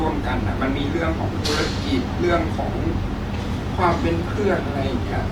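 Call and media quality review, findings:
Opus compression, throughout the clip. Speech sounds rough and grainy, with plainly audible damage. High end stays open to about 20.1 kHz. Likely the Opus encoder in CELT music mode, at a rate consistent with 24 kbps. Band energies are preserved, but the bits run short. Starved bands are filled with folded or noise content, so fine detail turns to texture.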